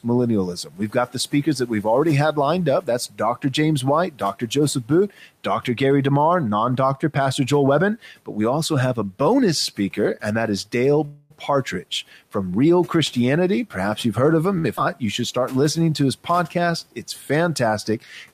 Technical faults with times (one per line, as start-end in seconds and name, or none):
0.54-1.86 speech cut by the noise suppressor
2.81-3.44 speech cut by the noise suppressor
3.82-5.26 speech cut by the noise suppressor
11.05-11.32 call audio freeze
14.58-14.66 short stall from a late packet
14.76-14.79 skip ahead
15.21-16.90 jitter buffer slow-down